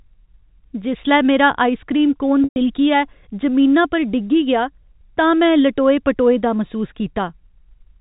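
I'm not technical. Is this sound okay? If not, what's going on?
No. Around 2.44 to 2.56 s, a burst of packet loss with pitch repetition hits the speech: about 120 ms of the signal went missing, and the receiver filled the hole by repeating the last bit of speech, which briefly sounds held and buzzy, then fades to silence before the speech returns.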